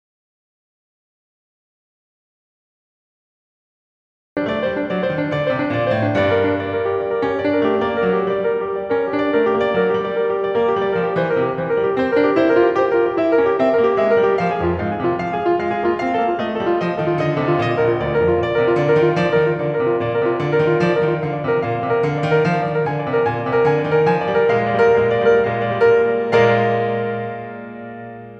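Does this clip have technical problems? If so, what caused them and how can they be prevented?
Yes. The music opens in silence, with no room tone at all, until it comes in mid-flow at 4.37 s. This is an audio dropout to silence, likely from the input being lost while the recorder kept writing zeros. Checking connections and mute states before recording prevents it.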